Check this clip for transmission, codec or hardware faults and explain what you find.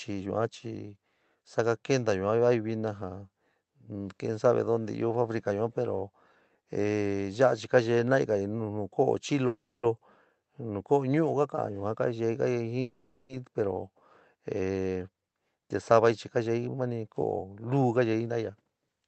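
The clip is speech. It has two call audio freezes and one jitter buffer speed-up. The sound passes through a call codec with high frequencies cut off at 8 kHz.

Call audio freeze, at 9.47 to 9.85 s and 12.81 to 13.31 s. The likely cause is delayed packets emptying the jitter buffer. The receiver stretches the last sound into a fading buzz. The first fill runs 360 ms and reaches silence for 230 ms. The second runs 480 ms and never goes silent. Nothing is lost. Each freeze adds delay instead.

Jitter buffer speed-up, from 15.91 to 19.04 s. The buffer holds more audio than it aims for. The receiver cuts many pitch-period slices to shed it. About a third of a second goes. Speech runs 10% faster at the same pitch and sounds hurried.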